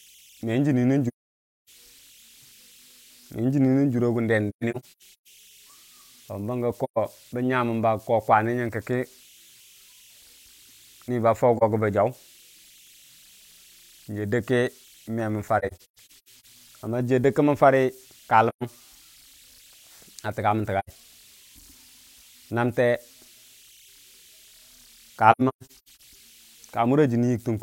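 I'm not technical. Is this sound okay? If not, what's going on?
No, it has two problems. The first is AAC frame loss with muting. Pieces of the speech drop out and are replaced by silence, with a soft fade in and out, because the player blanks any stretch of the compressed stream that never arrived. This happens at 1.08 s (about 0.6 s gone), 4.49 to 5.27 s (several short gaps, the longest about 0.15 s), 6.84 s (0.13 s), 11.57 s (0.04 s), 15.59 to 16.45 s (several short gaps again), 18.48 s just after "dəgki mən fara ka" (0.13 s), 20.79 s (0.09 s), and 25.31 to 26.01 s (scattered gaps).

The second runs through the whole recording: converter idle tones. The chip that turned the sound into digital data produces unwanted tones around 3 kHz. This happens when the incoming signal is very quiet and the chip settles into a repeating pattern. The tones come through in the pauses between speech, and under quiet passages they give the sound a grainy texture.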